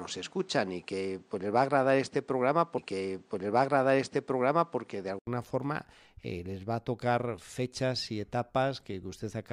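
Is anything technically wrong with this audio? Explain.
Yes, there are two faults. From 0 to 5.27 s the audio stops at 9.8 kHz and carries background noise well below the speech, likely from the input switching to a poorer device. An 80 ms gap then precedes "forma les va a".

Between 2.77 and 4.76 s a stream segment is repeated: the same 2.0 s of audio plays twice, marked by a small blip where playback jumps back.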